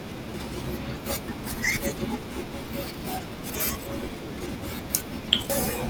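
At 0.34, 1.28, 2.48, 3.50 and 5.12 s the speech jumps ahead by about a tenth of a second, likely a dropped buffer (overrun). Samples were overwritten before being read, so the edges splice directly. The waveform shows an abrupt discontinuity, and the spectrogram shows a thin full-height vertical line.

Between 5.50 and 5.68 s, compressed frames are skipped. Roughly a tenth of a second of audio is missing, and the sound jumps ahead at the join.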